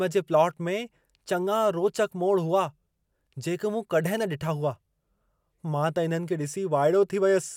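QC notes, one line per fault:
No faults found on this speech clip; no action needed.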